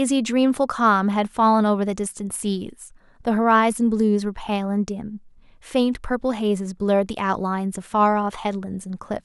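A speech recording with no technical faults to identify: level, timing and continuity hold steady throughout, with nothing that points to a problem in the recording or playback chain.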